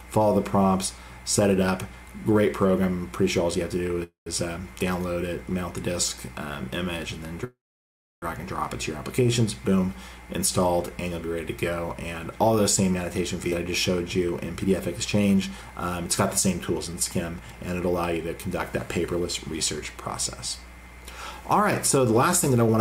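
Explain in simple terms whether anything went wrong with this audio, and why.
Several things went wrong.

There are two call audio freezes, at 4.03 to 4.29 s and 7.44 to 8.25 s. The sound stalls into a fading buzz, then silence in both. Delayed network packets likely left the receiver's buffer empty. Nothing is lost, but gaps are added.

There is a skip ahead at 13.5 s. Playback suddenly jumps forward. Roughly a fifth of a second of audio is simply gone, and the two sides are joined almost directly. That audio was dropped while later audio was already waiting.

There is a jitter buffer speed-up from 14.56 to 18.19 s, running about 6% fast. Shorter bursts follow at 18.86 to 19.26 s (8%) and 21.97 to 22.74 s (5%). Tiny pieces were cut out to reduce a built-up delay. The sound is hurried but keeps its pitch.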